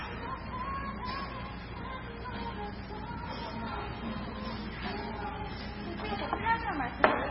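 A recording of everyday sounds that is watery and swirly from start to finish, with a dull top end that stops dead at about 5.5 kHz, smeared attacks, and metallic chirps on the brighter, noisier moments. The likely cause is heavy MP3 compression at a very low bitrate, consistent with something near 16 kbps. Starved of bits, the encoder cuts the treble at a fixed point and drops weak frequency lines, which flicker in and out between frames.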